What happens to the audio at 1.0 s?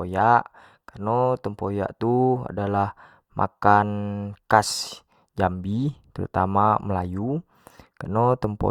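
Nothing goes wrong at 1.0 s; the speech runs through that moment intact, with no dropout, click or other fault.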